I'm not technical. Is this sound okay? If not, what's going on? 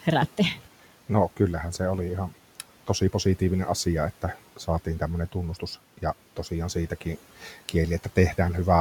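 No. From 7.4 to 7.74 s there is speech cut by the noise suppressor: the cleanup treated some quiet speech as noise and turned it down for about a tenth of a second, so it sounds swallowed but not silent, unlike a dropout. The faint room noise is part of the recording.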